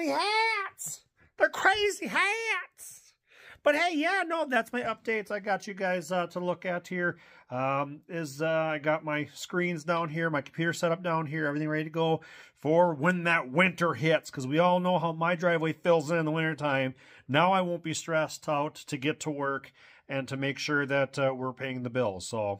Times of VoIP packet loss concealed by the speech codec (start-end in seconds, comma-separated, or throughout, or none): none